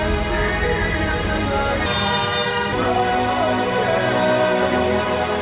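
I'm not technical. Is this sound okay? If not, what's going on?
No. There is a section at the wrong speed from 1.86 to 2.73 s. For that stretch the sound runs about 1.93 times too fast, so it turns hurried and jumps nearly an octave higher, then snaps back to normal. Because speed and pitch rise together, the likely cause is that this part was played back or edited against the wrong clock. The dull, muffled tone throughout comes from the call path, which carries nothing above 4 kHz.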